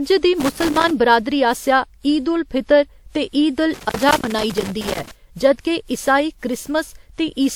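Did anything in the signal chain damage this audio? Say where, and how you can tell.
Yes. Throughout, the speech sounds swirly, smeared and hollow, with blurred consonant attacks, more than 96 kbit/s WMA alone would give. This is likely generation loss in the codec stage. Repeated lossy encoding, roughly four passes, stacks quantisation noise and spectral holes on shifting frame grids.

Loose connector crackle sits in the analogue wiring. Irregular bursts of scratching run from 0.40 to 0.91 s, ending before "बरादरी आसेआ ईद उल". A longer burst runs from 3.74 to 5.11 s, between "ते ईद उल" and "जद के ईसाई". A dirty contact is making and breaking, chopping the signal.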